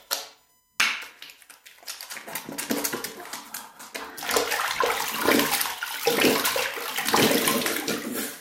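USB whine runs from start to end: a fixed-pitch tone sits beneath the sound, built on 1 kHz with its strongest component at the 18th harmonic, 18 kHz, roughly 40 dB below the sound itself. The pitch fits the USB bus drawing current in 1 ms frames, with that regular pulsing leaking into the audio path through shared power or ground. It comes across as a thin, steady whine, with its strongest component high up at 18 kHz.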